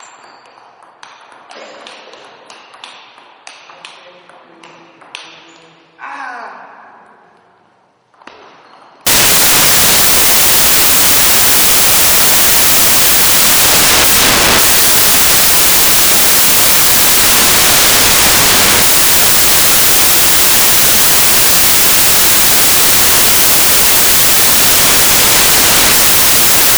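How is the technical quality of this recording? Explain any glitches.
Poor from 9.07 s onward, where samples built from the wrong bytes take over until the end. The reader misassembles each sample's bytes, so fast-changing low bits become the dominant value. This is heard as loud, harsh broadband noise, close to white on loud passages. The waveform looks like a dense block, and the spectrogram shows flat energy across all frequencies.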